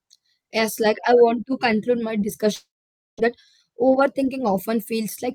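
After "want to conclude my", 2.55–3.19 s fades into buzz, then silence; speech resumes missing 0.62 s, likely a long network dropout.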